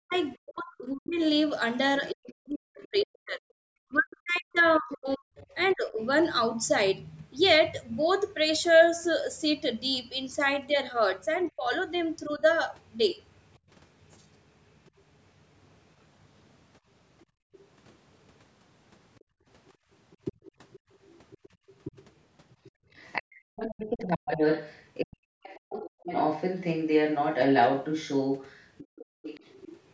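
From 0.0 to 6.01 s, speech suppressed in double talk: for roughly four seconds in total the talker's level sinks by up to around 40 dB and breaks into pieces, likely because the echo canceller could not separate near and far talkers and turned both down. On the waveform this shows as notched, hollowed stretches. Inside that span, at 0.17–2.08 s and 5.36–5.75 s, the other side's voice leaks through faintly, about 25 dB and about 30 dB below the speech, as scrappy traces on the spectrogram. A shallower dip of about 15 dB recurs briefly between 11.51 and 12.42 s.

From 17.26 to 25.43 s, and again at 28.95–29.23 s, the background is gated by the echo canceller: while the loudspeaker plays, the room sound drops by about 40 dB and then returns. On the spectrogram, the noise floor below the 8 kHz ceiling goes dark in blocks.

From 17.53 to 29.8 s the other side's voice leaks through strongly, only about 5 dB under the talker, likely residual loudspeaker echo that the canceller failed to remove. 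On the spectrogram it appears as a second, overlapping harmonic pattern.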